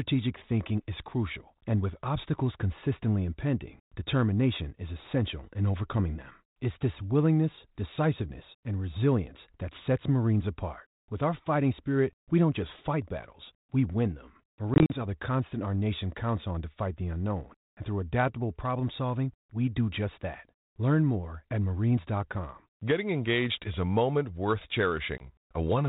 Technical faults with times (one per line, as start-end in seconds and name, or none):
14.74-15.03 packet loss on an ADPCM call
25.18-25.27 packet loss on an ADPCM call